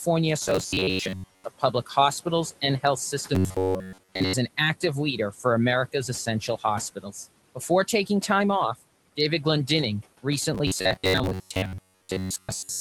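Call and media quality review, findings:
Noise suppressor artifacts, whole clip: residual background pumps down about 17 dB between phrases and returns under speech.

Robotic sound from repeated short buffers at 0.48–1.44 s, 3.35–4.33 s (ending just before "an active") and 10.55 s to end: rigid metallic buzz at 93.8 Hz, fitting an 11 ms block looped while most real audio is skipped; likely audio arriving too seldom at the playout buffer.

Speech cut by the noise suppressor, 1.59–1.9 s: about 100 ms of low-level speech pulled down by up to about 11 dB along with the background, so these sounds come out swallowed.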